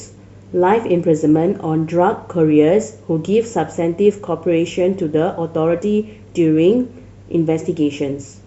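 Nothing here trips up the ear: the speech runs along without a single technical hiccup to point at.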